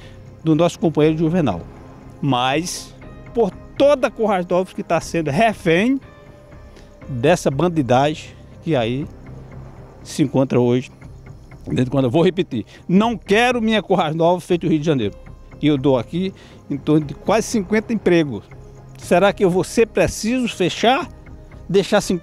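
No technical faults are audible.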